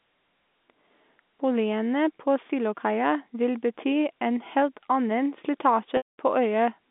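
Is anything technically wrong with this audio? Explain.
Yes, there is a packet loss with pitch repetition near the end, from 5.97 to 6.11 s. About 210 ms of audio went missing, a gap that fits roughly 21 lost 10 ms packets. The receiver covered the start of the hole by looping the last pitch period and fading it over about 50 ms, which produces a brief buzzy, held tone before the sound falls silent. That buzz separates it from a plain dropout, which cuts straight to silence. It also differs from a stutter, where whole syllables would repeat. The narrow telephone band of the G.711 line can be heard throughout.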